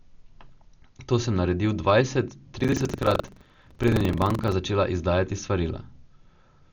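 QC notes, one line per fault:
Throughout: Dolby Digital compression, most likely. The band is narrowed, so the speech sounds dull, with a rough, fluttery hiss where the encoder starved lines of bits and the decoder filled them with noise. That fits a low AC-3 bitrate around 48 kbps.
2.56 to 4.53 s: buffer tearing. There's a robotic buzz at 23.4 Hz, which fits a 2048-sample buffer. In each period a small slice, roughly a tenth of a second old, gets replayed with hard joins on both sides, so the rattle follows the signal.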